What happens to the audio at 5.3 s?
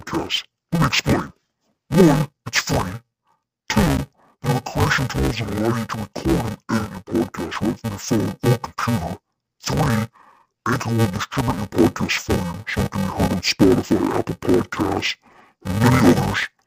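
At 5.3 s the speech is caught in interleaved audio read as planar, which runs through the whole clip. Each 2.9 ms block of alternating left and right samples, which fits a 128-sample block, is split into halves played together at half speed, leaving the voice dull, robotic and buzzing at 345 Hz.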